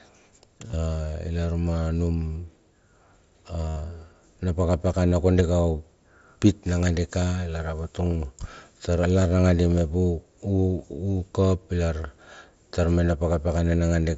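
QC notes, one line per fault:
0.67–0.73 s, concealed Bluetooth headset packet loss: about 52 ms of audio lost across 60 ms, longest gap 30 ms. The receiver filled the gaps by repeating the last matching waveform stretch, giving a brief buzzy hold. A waveform shows a repeated cycle at steady level. A spectrogram shows flat, frozen harmonics.
3.69–3.76 s, concealed Bluetooth headset packet loss: one unbroken 75 ms loss. The repeated fill becomes a held buzzy tone at full level, with a small warble where real audio returns. The waveform shows a periodic block. The spectrogram shows a horizontal harmonic stripe that ends in a smear.
5.10–5.11 s, concealed Bluetooth headset packet loss: 22.5 ms filled by a short repeat, a brief buzzy hold. It appears as a tiny frozen patch.
8.11–8.19 s, concealed Bluetooth headset packet loss: about 37 ms lost across 75 ms, runs no longer than 15 ms. This produces brief buzzy holds, with scattered short flat patches on the spectrogram.
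9.38 s, concealed Bluetooth headset packet loss: one very short loss, essentially masked. Beneath it the light wideband mSBC character stays, capped at 8 kHz.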